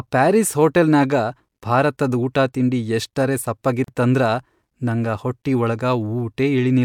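A short silence of about 39 ms cuts into continuous speech from 3.84 to 3.88 s, with edges that the codec has smeared, and the speech then resumes exactly where it stopped. This is a gap at a join of encoded pieces: the recording was encoded as separate segments and spliced together untrimmed, so the encoder's start-up delay and the padding on the previous segment's final frame both remain as dead air at the seam.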